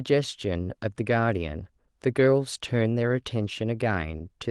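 No technical faults are audible in this speech; the call path through the Opus codec shows its expected band limit, with nothing above about 12 kHz.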